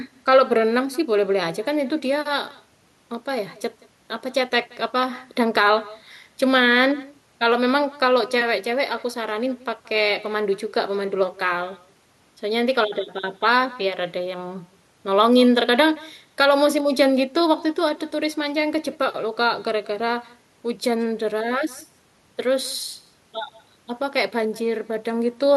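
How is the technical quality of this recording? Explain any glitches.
The recording has one fault that runs all the way through: echo with no canceller. Every phrase of speech is trailed, about a fifth of a second later, by a faint, thin copy sitting about 23 dB below it. The far end is playing the call out loud, its microphone picks that back up, and nothing strips it out before it returns.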